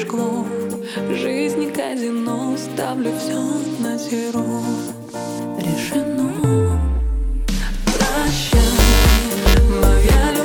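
From 8.74 to 9.54 s there's buffer tearing: the writer and the hardware reader have slipped, so each period carries a small sliver of audio from one lap earlier, about ten milliseconds stale, hard-spliced in. You hear a rattly robotic buzz at 345 Hz, which fits a 128-sample buffer.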